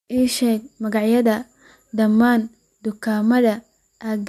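No technical faults are audible.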